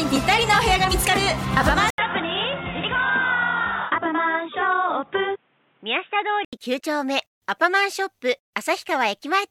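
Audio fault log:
1.90–6.53 s, input switched to a poorer device: there's an 80 ms gap at the switch, then the sound goes dull and boxy, with nothing above 3.8 kHz. It drops a few dB and picks up a new faint noise floor well below the signal, then clears again. That's likely a jump to a narrower-band microphone or headset.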